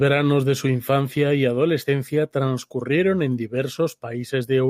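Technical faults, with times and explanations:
The speech signal holds steady throughout, with no dropouts, level jumps or spectral damage to note.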